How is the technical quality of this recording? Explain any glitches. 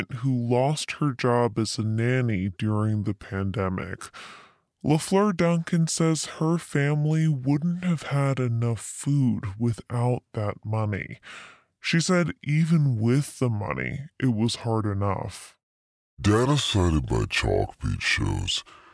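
The recording has one fault, and it lasts the whole clip. A wrong sample rate slows and lowers everything. Speech runs at 0.69 times normal speed, dropped 6.45 semitones, which fits 32 kHz audio played at 22 kHz.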